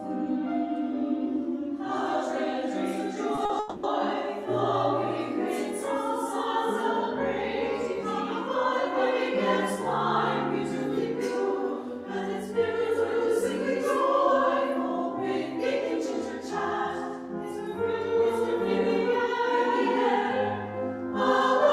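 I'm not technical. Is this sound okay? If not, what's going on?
No, there are two related problems, all within about half a second.

Short concealed packet loss occurs at 3.35 to 3.39 s and again at 3.45 to 3.51 s. Small pieces of the audio, 20 ms and then 40 ms, didn't arrive in time. The player covered each gap by stretching out the sound just before it, then blended back into the real audio, so you hear a quick smear or wobble, and anything brief in those moments can disappear.

A long network dropout follows from 3.59 to 3.85 s. For about a quarter of a second no audio came through, likely because the connection briefly stalled. The player kept extending the last sound, which comes across as a fading buzz or hiss. When the real audio returns, the part that was lost is simply gone rather than delayed.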